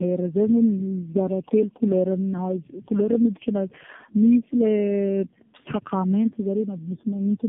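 Across the whole clip the speech carries tandem speech coding: it sounds like three narrowband AMR-NB stages in a row, each re-coding the last one's output. Unlike a single low-rate codec, the roughness, muffling and warble compound, with nothing above 3.6 kHz.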